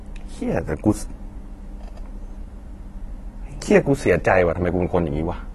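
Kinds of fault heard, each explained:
AAC compression: The speech runs dull throughout, with nothing above 12.1 kHz, and its sibilants and sustained sounds take on a fizzy, warbling texture. The likely cause is AAC-LC coding at a low bitrate, which fits a rate of about 32 kbps. It quantises each frame's spectrum coarsely, leaving gaps and noise-filled bands. A plain low-pass filter would also remove the top but keep the remaining spectrum clean and steady, with none of this shifting, smeared grain.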